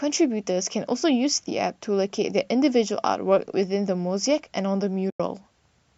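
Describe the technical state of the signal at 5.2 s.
At 5.2 s the speech is in a gap from AAC frame loss with muting, spanning 5.10 to 5.20 s, about 100 ms. The decoder zeroed the lost frames' spectrum. Overlapping windows fade the sound out and back in, leaving a soft-edged hole.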